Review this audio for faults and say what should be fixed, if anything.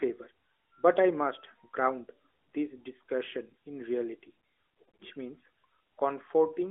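Between 4.84 and 5.04 s there's a patch of lost AMR speech frames: about 120 ms gone, scattered across 160 ms, the longest gap about 40 ms. The decoder papered over each gap by reusing the last good pitch and vocal tract settings at falling gain, so you hear short dips and warbles in the narrowband 300 Hz to 3.5 kHz audio rather than a full fade-out. The fix is upstream: better radio coverage or stronger channel error protection would keep those frames from failing their checksums.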